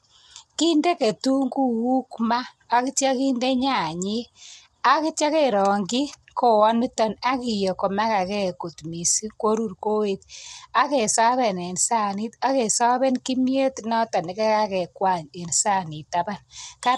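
Throughout the speech, the signal has likely passed through low-delay AAC compression, the AAC-ELD kind, at a rate that fits about 32 kbps. Its short frames resolve pitch harmonics poorly, leaving the voice plainly rough and grainy, with nothing above 11.6 kHz.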